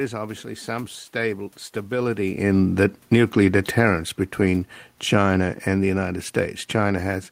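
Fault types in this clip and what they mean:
Automatic gain falling, 1.93 to 3.92 s and again from 4.51 s to the end: the gain control judged the input too hot and turned itself down gradually. Just after "obviously some stable" the level eases down by about 6 dB over two seconds, and the room noise sinks with it, which separates it from the talker shifting position near 2.0 s. From 4.51 s the same slow downward pull returns and continues to the end.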